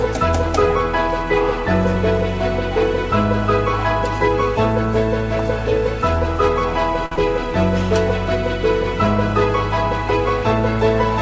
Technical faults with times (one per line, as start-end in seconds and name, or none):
7.06-7.13 short stall from a late packet
7.15-7.19 short concealed packet loss